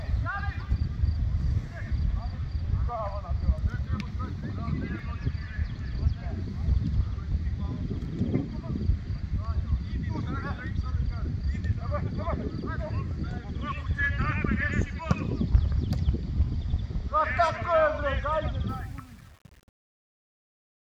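From 18.69 s to the end at 20.81 s, the closing fade-out turns gritty instead of thinning away cleanly. As the level drops, the sound coarsens. This is truncation distortion on a fade: the gain stage throws away low-order bits without dither, so near the bottom of the fade the waveform collapses into a few square steps, which fits an 8-bit word length.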